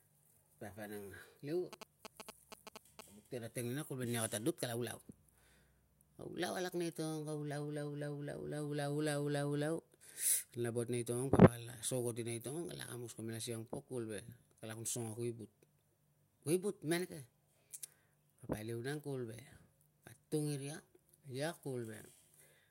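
From 1.73 to 3.01 s a galloping dit-dit-dit of short 217 Hz buzzes sits roughly 10 dB below the speech. These are GSM signalling bursts: a nearby 2G phone's brief radio bursts, rectified by the audio circuitry.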